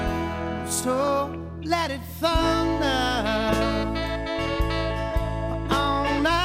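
From 0.93 to 1.08 s, DAB burbling: bit errors slip past error correction, making single sub-bands jump, giving short noisy blips rather than a dropout's silence.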